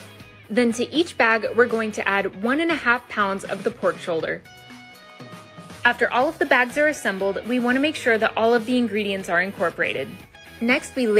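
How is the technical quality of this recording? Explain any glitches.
No glitches or technical faults can be heard here.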